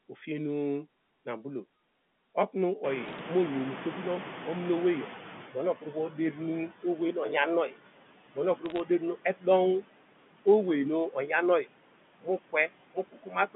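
Speech over a telephone line, carried throughout by noise suppressor artifacts. Noise is pulled down by about 17 dB between phrases and swells back under them. A spectrogram shows the band edges near 150 Hz and 3.5 kHz typical of the line. At about 3.0 s the room noise jumps by about 22 dB, and the noise suppressor catching up is audible from 2.83 to 5.76 s. For roughly 2.9 s the louder noise passes with only about 11 dB of reduction, then sinks as the suppressor's noise estimate adjusts, visible as a broadband grey wash fading over those seconds. Bit errors on a digital phone line appear twice, from 3.06 to 3.19 s and from 8.66 to 8.80 s. A scattering of sharp ticks over otherwise intact speech points to an error rate of around a fifth of a percent, with each flipped high or sign bit showing as a single-sample spike in the waveform and a thin vertical line across the spectrogram. Speech cut by the noise suppressor happens where quiet parts of the speech were mistaken for noise. 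Between 5.50 and 6.37 s the dips reach about 11 dB, between 6.69 and 7.15 s about 9 dB, between 8.34 and 9.47 s about 18 dB, and from 12.21 s to the end about 17 dB, with roughly 200, 100, 300 and 400 ms swallowed in those stretches respectively. These show as speech dropping into the noise floor, with notched gaps in the waveform envelope.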